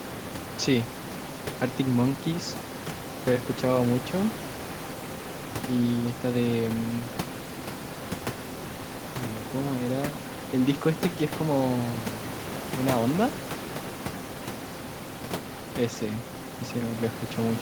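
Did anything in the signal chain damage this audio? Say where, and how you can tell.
No, nothing in the signal chain damaged this audio; the room noise about 12 dB below the speech belongs to the recording space itself.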